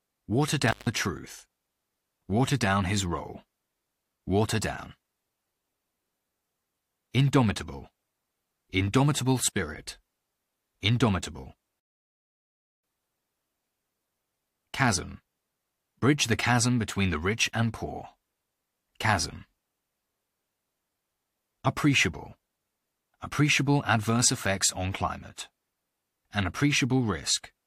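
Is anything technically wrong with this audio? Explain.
Yes, there are two faults. From 0.68 to 0.89 s, an intermittent contact briefly opens the signal path for about 155 ms, dropping the speech with crackle at each edge and faint hiss in the gap. From 11.80 to 12.84 s, a rebuffering stall leaves 1.04 s of silence while playback waits for data, then the speech resumes exactly where it stopped, with nothing lost.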